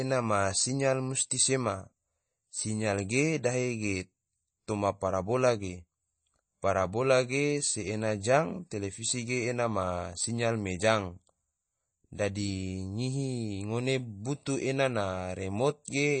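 All the way through, the speech carries plainly audible damage, likely from MP3 compression at a low bitrate, which fits something around 32 kbps. Nothing survives above 8.3 kHz, so the top is dull, and weak detail flickers in and out, leaving a watery, swirly texture.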